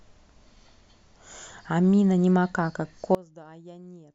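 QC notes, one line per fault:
3.15–4.15 s, one channel inverted: likely a polarity flip on one stereo channel, so the centred speech cancels on mono summing and drops about 24 dB to a faint residue.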